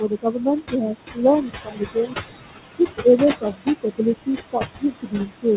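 Noise suppressor artifacts run through the whole clip. The suppressor pulls down the bands it judges to be steady noise by about 20 dB, frame by frame. The room noise, which sits only about 9 dB below the speech, therefore drops away in the gaps and comes back under each phrase. All of this sits inside the narrow band of the call path, which stops at 4 kHz.

Speech cut by the noise suppressor happens in six stretches: 0.0 to 0.95 s, 1.13 to 1.23 s, 1.42 to 2.15 s, 2.79 to 3.2 s, 3.41 to 4.01 s and 4.52 to 5.57 s. The gain estimator mistook low-level parts of the speech for noise and pushed them down with the background, by about 21 dB at the deepest and about 17 dB in the 2.79 s stretch. Within the first and third spans, roughly half a second of sound is affected. Soft consonants and trailing syllables come out swallowed or faint, and the closing stretch dips hardest, by about 22 dB.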